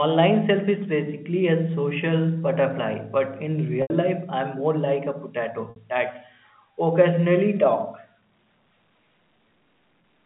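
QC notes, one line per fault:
3.82–3.90 s and 5.70–5.76 s, packet loss with pitch repetition: two runs of packets went missing, about 80 ms and then 60 ms of audio, which fits 20 ms packets. The receiver filled each gap by repeating the last pitch period and fading it out over roughly 50 ms. Both gaps outlast that fade, so the speech turns briefly buzzy and held, sinks toward silence, then cross-fades back, all within the 3.5 kHz telephone band.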